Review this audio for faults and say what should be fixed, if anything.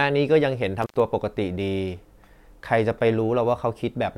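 The speech cuts out with a crackle between 0.82 and 1.00 s, dropping for about 95 ms: an intermittent contact, where a loose plug or cable briefly opens the line. Reseat and secure the connectors, replacing any worn cable, before recording.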